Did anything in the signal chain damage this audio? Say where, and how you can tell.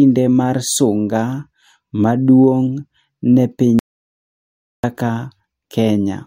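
Yes: audio dropout to silence, 3.79 to 4.84 s. The speech cuts to silence with no room tone, likely from a lost input link ahead of the recorder.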